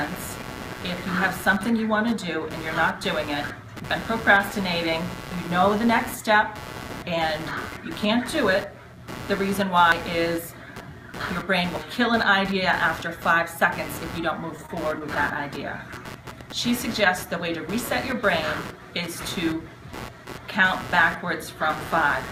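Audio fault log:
Throughout: computer activity noise, a buzzing pulse train at roughly 150 Hz sitting about 15 dB below the signal. It rises and falls with the machine's processing load rather than with the audio, as load currents disturb the shared ground of the audio circuit.
9.92 s and 11.76 s: dropped buffer (overrun), heard as a sudden jump forward, skipping about 70 ms at the first point and about 40 ms at the second. The likely cause is that the capture buffer was overwritten before the software read it, so the surrounding audio is butted together with no gap of silence.
14.57–15.37 s: repeated stalls (stutter), seven brief hesitations where the last sound is held and extended, the longest about 26 ms and together about 77 ms. The receiver's jitter buffer kept running dry, stretching about a tenth of the span. Nothing is lost, but the passage drags unevenly.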